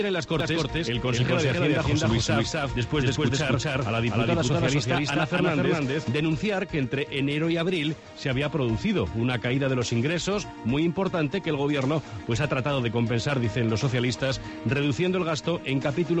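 A doubled audio track runs from 0.40 to 6.08 s, with a second full-band copy trailing the sound by roughly 0.3 s at about the same loudness. It carries no decay or room colour and cuts in and out abruptly, likely from a slower second capture path feeding the mix.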